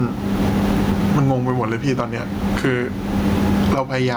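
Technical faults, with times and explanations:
Throughout, gain pumping: the input gain is likely far too high, so a fast limiter ducks each loud sound and the room background surges about 20 dB in the pauses.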